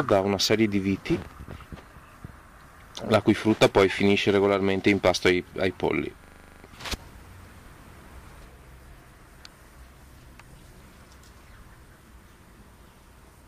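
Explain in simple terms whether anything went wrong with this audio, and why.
Something did go wrong, once. From 6.24 to 6.64 seconds there is a system hang loop. The computer or its driver briefly froze. The sound hardware kept playing the same small stretch of audio over and over. Here that stretch is 40 milliseconds long. It repeats 10 times, at 25 times per second, so you hear a rapid mechanical repetition. After the loop, the sound carries on with almost nothing missing.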